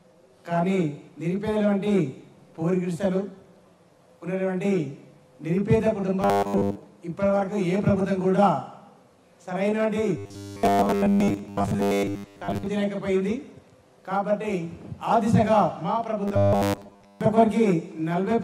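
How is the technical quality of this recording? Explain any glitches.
The recording has three passages of robotic sound from repeated short buffers, at 6.22–6.77 s, 10.17–12.66 s and 16.28–17.21 s. Each passage is a rigid, metallic buzz fixed at 100 Hz. The likely cause is late-arriving audio, with the software looping roughly 10 ms chunks and skipping most of the real material. Unlike a dropout, the sound never goes silent.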